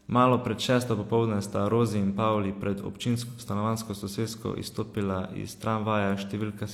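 At 3.23 to 3.40 s, just before "stanovanjsko sosesko izstopila", AAC frame loss with concealment occurs: a gap of about 85 ms, consistent with two missing frames, is patched by the decoder from the last good spectrum, leaving a brief smeared, noisy, phasey stretch in the speech.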